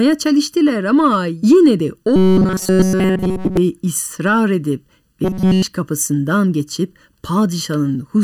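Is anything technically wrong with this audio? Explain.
Yes. There are two problems. Throughout the speech there is channel delay (comb filtering): one channel runs less than a millisecond behind the other, and when the two are summed to mono the shared content cancels at evenly spaced frequencies starting near 700 Hz. The voice sounds hollow and phasey, with fixed notches.

Robotic sound from repeated short buffers is audible from 2.16 to 3.57 s, after "çalıştılar ama yine de" and before "ısrar edip ve", and again from 5.24 to 5.62 s, before "kapısından geçip". The likely cause is audio arriving too rarely, with the last fragment of roughly 5 ms looped in place of the missing signal. This imposes a rigid 188 Hz metallic buzz that only loosely follows the speech.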